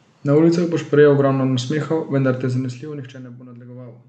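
Nothing in the speech stood out as a technical fault on listening.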